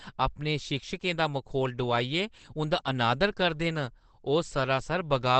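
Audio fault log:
Throughout: Opus compression, and pretty heavy at that. The speech sounds muffled and a bit hoarse, with nothing at all above about 8.5 kHz, so there's no air or crisp sibilance left. That dull, rough, wideband character is what you'd expect when the encoder is likely squeezed down into its SILK speech mode, which fits a starved bitrate somewhere around 12 kbps. At that rate the codec models the voice rather than preserving the full spectrum.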